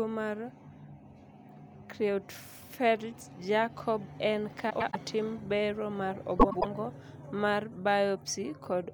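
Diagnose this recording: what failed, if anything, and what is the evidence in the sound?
The fault is frames out of order, at the network or jitter-buffer stage ahead of the decoder. After "en ka", the speech from 4.70 to 4.96 s turns into a garbled flutter, and "bero mar" follows. After "bero mar", the same flutter returns from 6.39 to 6.65 s. In each stretch, two adjacent blocks of about 104.5 ms were decoded swapped, which points to runs of four frames. No time is lost.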